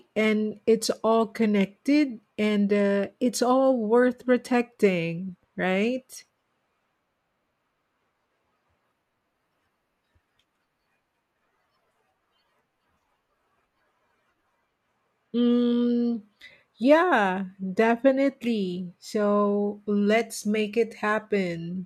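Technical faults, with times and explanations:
No technical faults can be heard in this recording.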